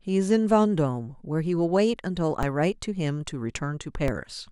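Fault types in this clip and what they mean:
DC step: the waveform's zero line jumps abruptly by about -15 dBFS, once at 2.43 s and again at 4.08 s. Each jump is heard as a short low thump or click laid over the speech, which carries on unchanged underneath. Neither offset holds. Each bleeds away within a few tens of milliseconds, as a 20 Hz high-pass in the chain pulls the baseline back to zero, so each step is a brief transient rather than a lasting shift.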